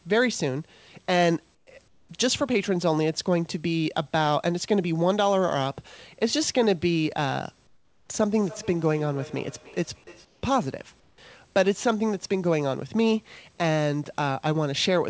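A speech recording carries two kinds of fault. Comfort noise in place of the background appears in five pauses, at 1.55 to 1.67 s, 1.88 to 2.09 s, 7.67 to 8.09 s, 10.25 to 10.43 s and 11.00 to 11.18 s. There the room's textured background gives way to a flat, featureless hiss about 5 to 10 dB quieter, lasting 120 to 420 ms. The likely cause is discontinuous transmission: the sender goes silent when it detects no speech, and the receiver synthesises noise. Unlike a dropout, the gap is never silent, and the texture, not just the level, changes. From 8.38 to 10.7 s there is feedback echo between two devices. The speech returns at a fixed spacing of roughly 300 ms, about 20 dB below the direct sound, with each pass thinner and more ringing. A second device in the room is replaying what its neighbour's microphone sent. The regular spacing and the progressive coloration separate it from room reverberation, which smears continuously rather than returning in distinct copies.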